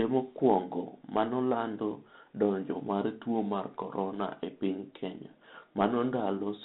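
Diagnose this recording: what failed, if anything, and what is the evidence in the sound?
The failure is at the codec stage: a Bluetooth CVSD headset codec across the whole clip. Nothing above 4 kHz survives. S sounds turn scratchy. A granular hiss sits under the speech. One-bit up-down steps can't track loud high sounds, fitting a 64 kbit/s link.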